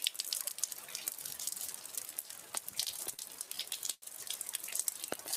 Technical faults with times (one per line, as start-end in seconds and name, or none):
0.00-5.37 noise suppressor applied to music or sounds
2.84-4.03 repeated stalls (stutter)